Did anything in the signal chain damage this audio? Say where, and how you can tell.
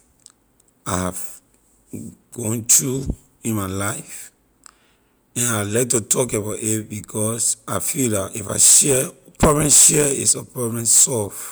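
No, nothing along the chain left a mark on this speech recording that I can hear, so there's no damaged stage to point to.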